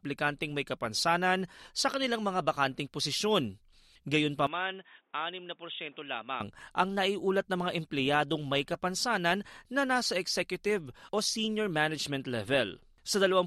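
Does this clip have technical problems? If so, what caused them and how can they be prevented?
Yes. From 4.47 to 6.41 s the speech turns dull and boxy, with nothing above 3.8 kHz, a drop of about 10 dB and faint new background noise. The likely cause is an input switched to a poorer device, with a narrower band and its own noise. Lock the recording to one fixed input device and turn off automatic device switching.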